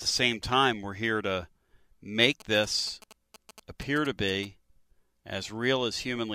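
From 2.40 to 4.45 s the speech picks up GSM signalling bursts: a nearby 2G phone sending short groups of radio bursts, rectified by the audio circuit into galloping ticks and brief 217 Hz buzzes, sitting about 20 dB below the speech.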